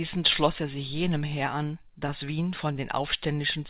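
A speech clip carried over a narrowband call path, with nothing above about 4 kHz, which fits a G.711-type codec. Right after "schloss er sich jenem", from 1.38 to 2.34 s, come scattered short gaps. Around five small holes appear where audio arrived late or not at all, about 40 ms in total. The longest is roughly 15 ms. The receiver filled each one by stretching the preceding sound. Together they cover only a small share of the span. The result is brief ticks and tiny smears in otherwise clear speech. From 2.73 to 3.33 s there is a jitter buffer slow-down. The receiver's reserve had run low or its target delay had just been raised. To rebuild it, it repeated single pitch periods again and again. That added 40 ms over the 0.6 s stretch. Speech there plays at about 95% speed with unchanged pitch. Sounds feel slightly drawn out.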